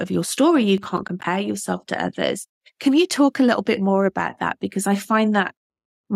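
From 0.78 to 1.24 s, just before "yourself to others", a gritty burst of crackle tears through the speech and clears once the phrase arrives. This is processor overload crackle. The processor fell behind and missed a run of buffer deadlines, around seven, each roughly 10 ms long. Every missed buffer drops out as a short hole of silence with abrupt edges, and those repeated clicks and gaps fuse into the rough tearing texture.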